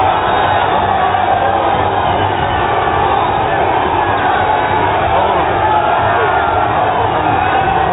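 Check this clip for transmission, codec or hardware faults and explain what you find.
No faults turn up on checking this clip.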